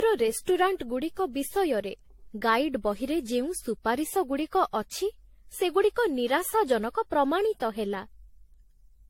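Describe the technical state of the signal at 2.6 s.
At 2.6 s, as throughout, the speech sounds swirly, hollow and smeared, with nothing above 16.5 kHz. This is likely generation loss from about seven lossy re-encodes.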